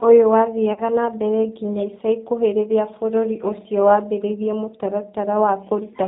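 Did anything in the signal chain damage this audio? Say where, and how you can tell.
Yes. The codec stage uses G.729: all the speech is band-limited below 4 kHz and sounds rough and synthetic, which fits 8 kbit/s pulse-coded reconstruction of the voice.

VoIP packet loss concealed by the speech codec, on the network side: from 0.73 to 0.82 s, before "na mbere nginya ica", a 30 ms gap, which fits one lost packet, becomes a fading extrapolation that stays weak afterwards.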